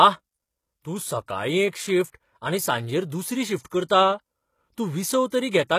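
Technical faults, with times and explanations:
Throughout, HE-AAC compression: treble is likely rebuilt from copied lower bands at around 20 kbps, so sibilants sound gritty and metallic, with nothing above 14.9 kHz.
2.12 s, 3.89 s and 5.29 s, pre-echo: a brief hiss of about 15 to 26 ms smears in ahead of each attack, the first just before "आनी सांजेर", as block-spread quantisation noise leaks forward.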